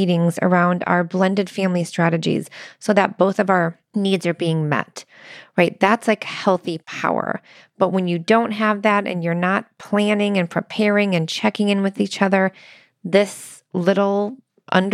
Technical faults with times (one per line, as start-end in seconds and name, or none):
none